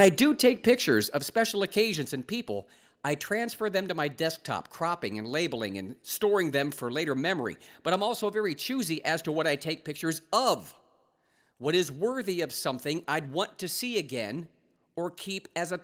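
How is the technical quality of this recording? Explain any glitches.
The quality is compromised at the very start, where two related problems cut into the opening second.

From 0.0 to 0.7 s, just before "of special", there is microphone overload. The input level was likely set too high, so the loudest peaks drove the converter roughly 6 dB past its limit and had their tops sliced flat. Only a small share of the waveform, around one or two percent of samples, is affected, but those flattened peaks add a harsh, crackling edge to the loudest syllables.

Twice the microphone volume is stepped down: at 0.05 s by about 3 dB, and at 1.05 s, right before "of special", by about 5 dB. The call software likely reacted to the distorted peaks by cutting the device's input gain in a single jump each time rather than fading it. The voice and the background both drop abruptly in level at those two moments, giving an audible lurch in loudness near the start.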